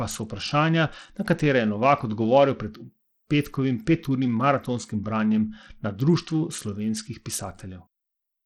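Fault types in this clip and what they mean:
Bluetooth SBC compression: The speech has lost treble that comes and goes, with gritty noise and aliasing riding on it, which points to a low bit pool, likely around 80 kbps. On a spectrogram the upper bands appear ragged, flickering and gapped, with quantisation speckle.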